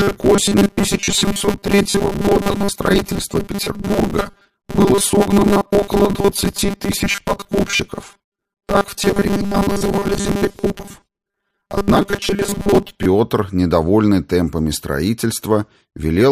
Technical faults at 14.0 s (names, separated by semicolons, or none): none